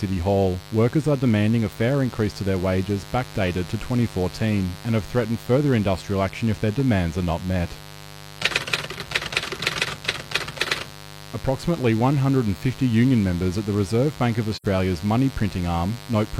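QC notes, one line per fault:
throughout, mains buzz: a steady, raspy 50 Hz buzz sits roughly 20 dB below the speech, produced by sharp switching spikes twice per mains cycle. A spectrogram shows evenly spaced horizontal harmonic lines stacked from 50 Hz up to several kHz for the whole length.
14.54 to 14.66 s, AAC frame loss with muting: the speech fades into a soft-edged silent hole, consistent with about 85 ms of lost audio, which fits two missing frames zeroed by the decoder. The spectrogram shows a clean vertical gap; the waveform tapers smoothly in and out.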